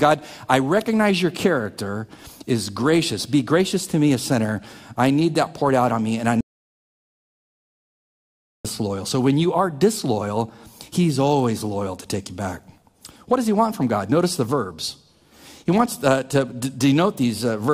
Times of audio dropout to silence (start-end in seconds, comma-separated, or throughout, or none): 6.41-8.65